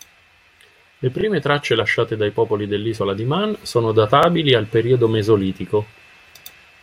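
Overlapping chunks appear in this speech clip at 1.21 to 1.23 s and again at 4.23 to 4.26 s, three seconds apart. At each join the audio was cut into 3-second blocks whose starts reach back about 25 ms into the previous block, so that sliver of speech is played a second time. The doubled fragment is heard as a brief stutter or click at the seam, recurring at the block rate.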